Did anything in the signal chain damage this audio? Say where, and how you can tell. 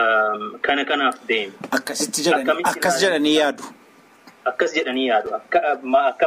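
Yes, a block of digital silence at 5.26 s, about 5.8 ms long: a driver or buffer underrun fitting a 256-sample buffer. Heard as a tick or dip rather than silence, not a concealed network packet loss.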